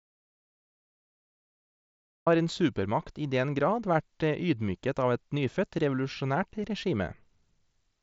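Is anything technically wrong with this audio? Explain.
Yes, there are two faults.

Audio dropout to silence, from the start to 2.26 s: the file opens in silence with no room tone, and sound begins abruptly on "har en supermakt i". This is likely due to a lost input, such as a disconnected device or a mute, while the recorder kept writing silence.

Concealed Bluetooth headset packet loss, at 6.52 s: about 7.5 ms of audio went missing between headset and phone, which fits a single lost mSBC frame. The receiver filled the gap by repeating a matching stretch of recent waveform, leaving only a tiny, nearly hidden blip in the wideband headset sound.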